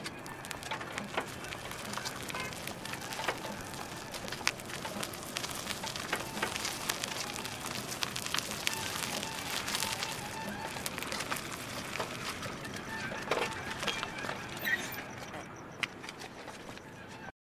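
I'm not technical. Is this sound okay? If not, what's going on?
Yes, this one's fine, and there's nothing in it that sounds like a technical problem.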